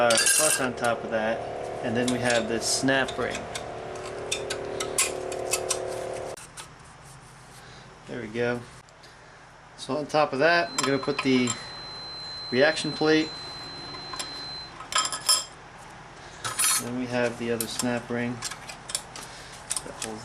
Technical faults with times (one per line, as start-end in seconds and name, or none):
10.57-14.75 feedback whistle